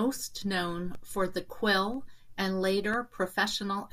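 The clip is speech with periodic USB or driver dropouts. From 0.95 s to the end, a short tick recurs once every second. Each time, about a millisecond of audio drops to silence. A background task stalling the bus or audio driver at a fixed interval would cause this.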